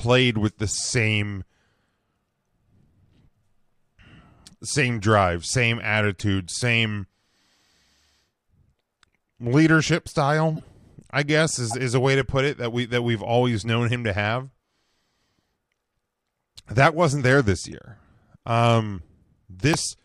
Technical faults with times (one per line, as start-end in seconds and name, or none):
0.69-0.74 corrupt frame decoded
6.19-6.22 corrupt frame decoded
10.56-10.64 corrupt frame decoded
11.70-11.74 corrupt frame decoded
14.88-14.93 corrupt frame decoded
17.72 corrupt frame decoded
19.73 corrupt frame muted